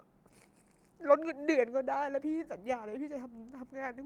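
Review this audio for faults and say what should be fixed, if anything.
Nothing to fix; no faults turn up here.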